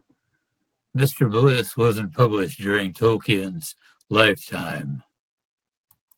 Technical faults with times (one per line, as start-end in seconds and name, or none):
0.00-6.17 periodic clock jitter